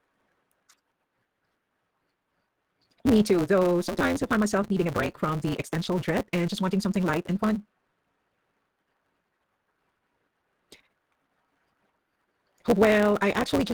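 All the way through there's a block size mismatch (truncated): block ends get discarded, giving a 172 Hz buzz and speech racing at 1.88 times speed, which fits a 256-sample read. Lost packets were rebuilt from error correction at 3.17–3.28, 4.51–4.65 (after "though sometimes I find"), 4.95–5.09 (after "needing a"), 5.85–5.97 (before "dread and just") and 6.92–6.95 s, with no gaps but briefly rougher, noisier sound.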